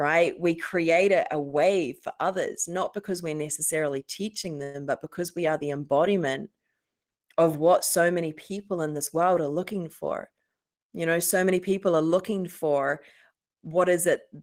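At 4.63 s, just after "because we're necessarily teaching", the speech halts for about 0.14 s in what is likely a call audio freeze. Delayed packets starved the jitter buffer, so the last sound was stretched into a brief fading buzz before resuming at "but because we are". On a spectrogram this shows as smeared horizontal bands with no silent gap.

From 10.30 to 10.79 s, after "world are looking for", a jitter buffer speed-up plays the speech at about 111% speed. Repeatedly cutting short pieces of one or a few pitch periods trimmed about 50 ms of backlog. Pitch stays unchanged but the delivery sounds hurried.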